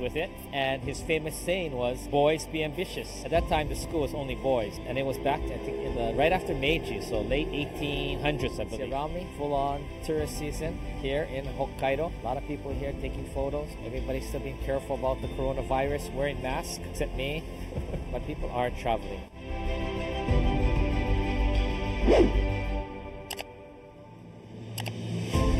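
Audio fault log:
Throughout: channel delay (comb filtering), hollow, phasey tone with fixed notches starting around 1.5 kHz, as one channel lags by roughly 0.4 ms before the mono sum.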